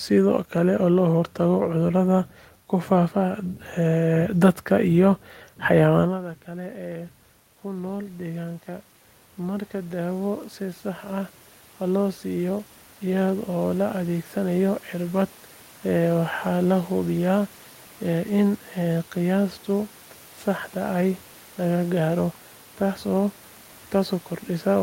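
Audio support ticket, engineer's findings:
Automatic gain rising, 6.45–15.27 s. AGC ramps gain up about 13 dB after the talker moves away near 6 s and input drops about 17 dB. Room noise swells with the voice.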